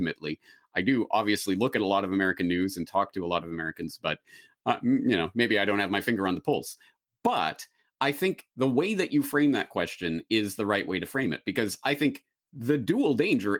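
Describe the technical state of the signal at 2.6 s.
At 2.6 s the speech is intact, with no fault audible, only the light, even coding of the Opus voice compression running in its full-band hybrid mode.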